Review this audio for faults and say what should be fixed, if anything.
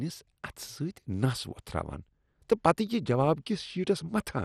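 Throughout, the speech sounds dull and gurgling, with granular distortion and nothing above 14.2 kHz. This is likely MP2 compression starving upper sub-bands, consistent with a 64 kbps rate. Encode at a higher bitrate or use a more efficient codec to prevent it.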